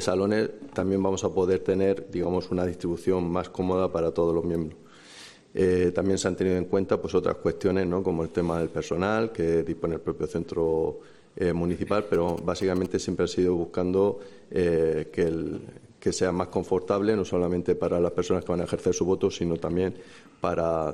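From 12.14 to 12.87 s, GSM signalling bursts break in: a nearby 2G handset's short radio bursts get rectified by the audio circuitry, producing a galloping dit-dit-dit of short buzzes at 216.7 Hz, sitting roughly 15 dB below the main sound.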